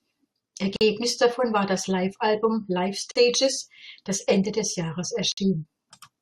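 At 0.76, 3.11 and 5.32 s the speech drops out for about 47, 43 and 54 ms, the first just before "davon war das": a gap at a join of encoded pieces, where untrimmed encoder delay and padding remain. Each shows as a near-flat waveform stretch and a blank vertical band on the spectrogram, with slightly smeared edges.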